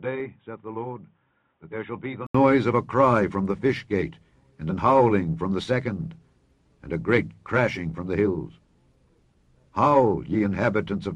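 From the start to about 2.35 s the audio is band-limited, with nothing above about 3.8 kHz, so it sounds dull and boxy. It is also noticeably quieter, roughly 10 dB down, over a faint noise floor of its own. A gap of about 80 ms then precedes full-bandwidth sound. The likely cause is the input switched to a poorer device, a narrower-band microphone or headset call profile, before the system changed back to the main input.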